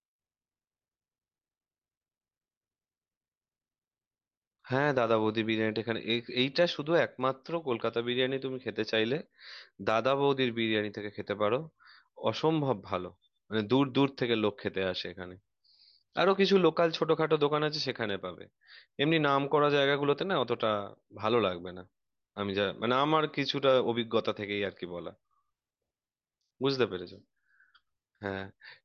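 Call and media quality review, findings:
Nothing to flag on this one: the speech comes through without any problems worth raising in the ticket.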